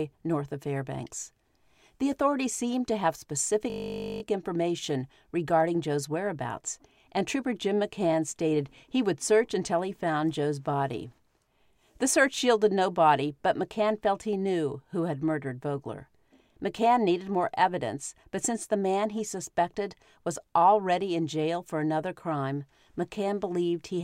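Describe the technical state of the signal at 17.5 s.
At 17.5 s the speech signal is intact, with no dropout, clipping, glitch or other technical fault.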